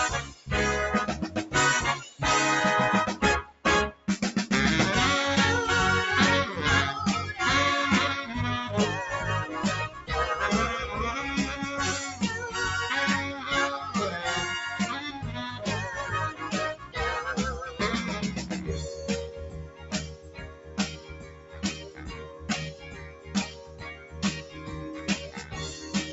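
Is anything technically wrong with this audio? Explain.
Yes. A noise suppressor built for speech was left running on this music or sound material, and it treats steady tones, sustain and ambience as noise. It clamps them down while attacks pass, so level swings by about 15 dB and the sound pumps and thins throughout.

Sound cut by the noise suppressor occurs at 0.26–0.47 s, 3.44–3.65 s, 3.92–4.08 s, 9.89–10.1 s, 16.76–16.96 s, 19.27–22.49 s and from 22.66 s to the end. The suppressor misjudges held or decaying material and pulls it down by about 9 to 11 dB, so sustains sink and tails are cut short. The last two spans are long stretches rather than brief dips. The call path's top end stops at 8 kHz.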